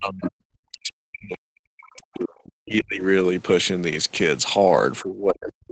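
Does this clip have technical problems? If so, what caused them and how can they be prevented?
Yes. The echo canceller likely could not separate the local talker from the loudspeaker echo while both sides spoke at once, so it turned everything down. This speech suppressed in double talk makes the talker sink or break up from 0.0 to 0.32 s, 0.71 to 3.02 s, and 5.02 s to the end, with the deepest dips about 35 to 40 dB. Headphones, or an echo canceller with better double-talk detection, would prevent it.

The echo canceller likely did not fully remove the far end's loudspeaker sound from the microphone, so the other side's voice leaking through is audible as a brief scrap from 0.25 to 0.29 s, about 15 dB below the talker. Using headphones or lowering the loudspeaker volume would keep it out.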